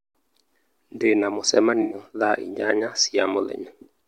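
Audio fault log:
1.82–1.94 s, AAC frame loss with concealment: about 85 ms of audio, which fits four lost frames, is replaced by a smeared, noisy patch from the previous spectrum rather than silence or a click.
3.19 s, dropped buffer (overrun): the sound jumps ahead with no silent gap, likely from a buffer of around 10 ms overwritten before it was read.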